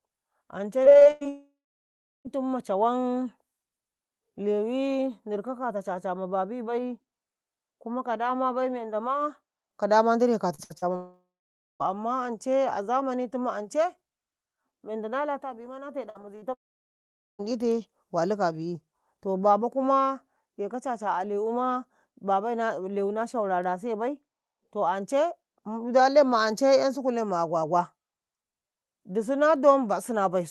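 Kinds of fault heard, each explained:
Repeated packet loss (robotic sound): Chunks of the stream went missing one after another, and each hole got papered over by stretching the last bit of sound, so you hear choppy stuttering with pieces missing. It hits at 0.83 to 1.27 s (seven gaps, the longest about 98 ms, roughly half that stretch patched), at 10.55 to 10.84 s just after "bai ndire" (three gaps), and more lightly across 16.10 to 17.45 s (five short gaps).
Long network dropout: Here the sound smears into a fading buzz and then just goes quiet for a good while before picking up again further along, with that chunk simply gone. The likely cause is nothing arriving over the network, so the receiver keeps the last sound going until it gives up. It happens at 1.29 to 2.27 s (about 0.7 s near-silent), 10.96 to 11.82 s (about 0.55 s silent) and 16.54 to 17.41 s (almost all of it silent).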